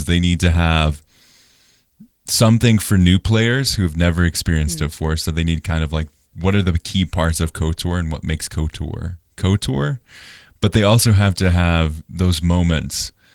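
No faults are present in this speech recording; the Opus voice compression keeps the full band and adds only light coding texture, consistent with a hybrid mode at around 20 kbps.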